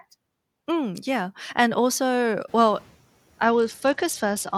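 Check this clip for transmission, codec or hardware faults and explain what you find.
Two faults stand out: a noise suppressor catching up after the background noise jumps, and a Bluetooth SBC bit pool drop near the end.

At 2.47 s, right after "yeah and also", the room noise rises sharply by about 20 dB, and the noise suppressor catching up takes 0.44 s, to 2.91 s, to follow it. Its noise estimate still reflects the quieter floor, so the new noise passes with little reduction before sinking by about 5 dB. On a spectrogram the broadband noise floor brightens suddenly, then dims over that span. In the waveform the gaps between syllables show a raised, slowly shrinking noise envelope.

From 3.44 s to the end of the clip, the audio dulls and turns gritty, the signature of a Bluetooth SBC bit pool drop. The phone cut the encoding rate to keep a congested link alive. The sound fits a fall from a bit pool of about 28 to 10, near 84 kbps. 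The upper sub-bands receive few or no bits, and the lower ones are coarsely quantised. A spectrogram shows the treble abruptly cut off above a sharp ceiling, with speckled quantisation noise filling the remaining bands.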